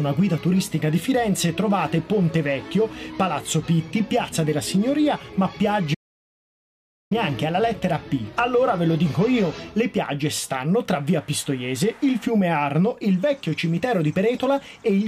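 At 5.95 s the sound cuts off abruptly into dead digital silence, with no room tone at all, and returns just as suddenly at 7.11 s. This is an audio dropout to silence, likely from the input briefly disconnecting or muting while recording continued, losing about 1.17 s.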